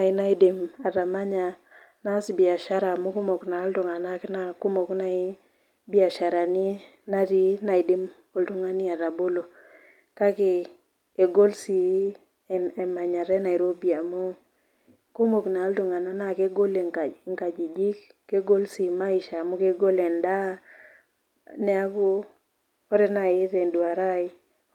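Speech recording, no technical faults to report anywhere in the clip.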